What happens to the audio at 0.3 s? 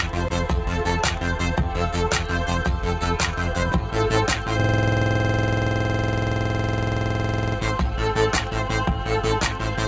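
At 0.3 s a noise suppressor applied to music or sounds is acting, as it does throughout the clip. Built for speech, it treats sustained tones, ambience and reverb tails as noise and pulls them down by about 5 dB while onsets pass, so the sound pumps and thins.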